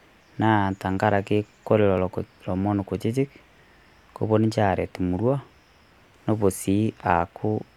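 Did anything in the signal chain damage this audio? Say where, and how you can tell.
Yes. There are two abrupt skips in the speech, at 1.98 s and 4.95 s, each dropping around 20 ms with the two sides butted straight together. They're 3 s apart, so this is likely audio missing between chunks at the buffer stage, lost at each handover.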